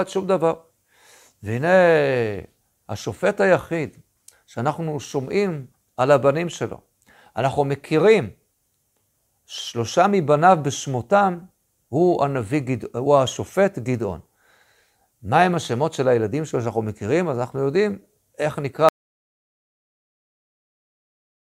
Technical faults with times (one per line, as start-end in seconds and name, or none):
18.89-21.42 audio dropout to silence